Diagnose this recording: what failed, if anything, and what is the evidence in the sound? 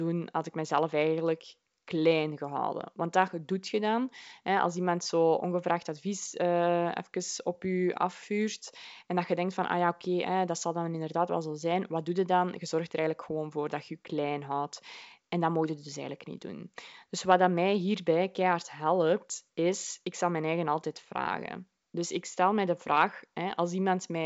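Nothing has failed here: the speech comes through G.722 wideband telephone coding just as that codec should sound, with the band stopping near 7.7 kHz and at most a faint trace of its coding, which points to it running at the full 64 kbit/s.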